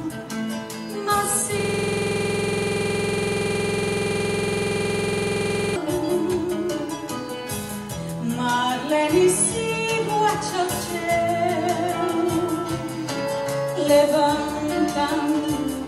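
A system hang loop runs from 1.60 to 5.76 s. The host stalled while the audio hardware kept cycling its ring buffer, so one 46.44 ms slice repeats about 90 times. It produces a rough, rattling buzz at 21.5 Hz, which fits a 2048-sample buffer.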